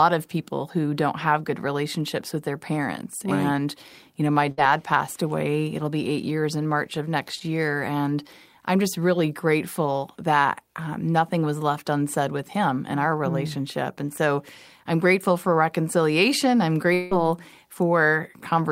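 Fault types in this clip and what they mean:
Burst of packet loss: a run of packets went missing, so at 4.51 s the receiver stretched the last sound for about 60 ms, then skipped ahead.
Long network dropout: likely a longer network outage; at 16.93 s the last sound is extended and fades for about 180 ms before the audio resumes further on.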